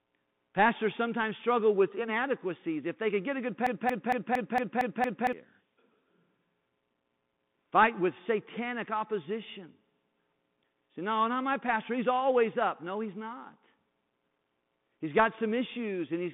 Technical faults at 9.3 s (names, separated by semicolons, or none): Bluetooth CVSD headset codec